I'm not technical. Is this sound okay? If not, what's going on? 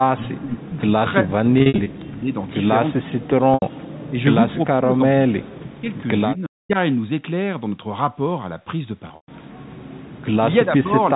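No. The speech keeps getting pushed down or chopped at 0.15–0.83, 1.22–2.33, 2.96–3.42, 4.09–4.18, 4.65–5.89, 6.35–6.77 and 10.65–11.16 s. That's likely speech suppressed in double talk: both ends spoke together, and the echo canceller turned this side down too.

There's also packet loss with pitch repetition at 1.58–1.86, 3.54–3.62 and 9.08–9.28 s. Bits of audio went missing, and the receiver filled the gaps by repeating the last moment of sound. That gives a brief held, buzzy tone, and the longer gap around 9.1 s fades away before the speech comes back.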